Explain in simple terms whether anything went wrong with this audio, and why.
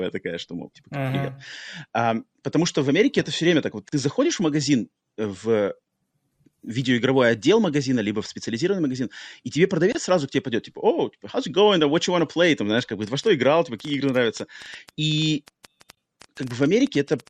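Three things went wrong with this speech recording.

The whole clip has a watery, swirly quality, with a thin, dull top end. This is MP3 compression damage, and it is plainly audible. The encoder likely ran short of space. When that happens, it cuts off the highest frequencies and drops quiet details. Those details flicker on and off moment to moment. S sounds turn metallic, and the starts of sounds get blurred.

There are three tiny silences, each a gap at a join of encoded pieces. The first comes at 3.89 s, after "все время так вот" and before "заходишь в магазин э". It lasts 36 ms. The second comes at 9.92 s, between "специализированный магазин и тебе" and "сразу к тебе пойдет", and lasts 24 ms. The third, also 24 ms, is at 15.95 s. They fall every 6 seconds. That points to the audio being encoded in separate chunks. The chunks were then stuck together without trimming the padding each one carries, so speech briefly drops out and resumes.

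From 12.79 s to 17.28 s there is a train of clicks. Roughly forty sharp ticks arrive, about nine per second, at an uneven pace. They peak a little above the speech and can be heard in the pauses too. They all sound alike. That suggests something outside the sound itself, most likely electrical interference or a faulty connection or power supply.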